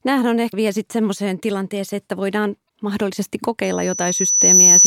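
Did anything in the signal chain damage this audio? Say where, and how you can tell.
Yes. At the codec or storage stage, the compressed stream carries damaged data in two places. Speech breaks up briefly from 0.49 to 0.54 s, just before "vielä sitten semmoiseen tilanteeseen", and again from 2.65 to 2.70 s, right after "tilanteeseen kenties että voidaan". Corrupted bytes make the decoder misread those frames and lose sync. It then hunts for the next valid frame header, so each hit lasts only some 40 to 50 ms.

The second problem is acoustic, in the microphone and loudspeaker path. From 3.63 s, after "kenties että voidaan mahdollisesti", a loudspeaker feedback squeal takes over and runs to the end of the clip. A 6 kHz tone swells over about a second until it sits roughly 10 dB above the speech. The microphone was picking up its own loudspeaker, and loop gain exceeded unity at 6 kHz, so that frequency kept reinforcing itself.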